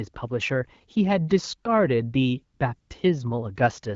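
At 2.57 to 2.59 s and again at 2.79 to 2.89 s, the phone judged the talker silent and stopped sending speech frames, producing AMR comfort noise. The receiver substituted smooth synthetic noise, briefly replacing the real background, through otherwise lightly coded 12.65 kbit/s AMR-WB speech.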